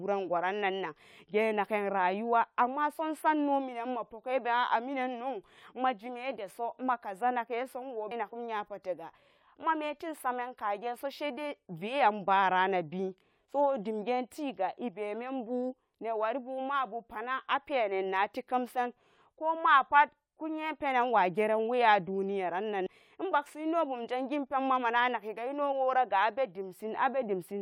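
At 8.11 s and again at 22.86 s, damaged data in the compressed stream makes the decoder misread a frame, giving a brief glitch.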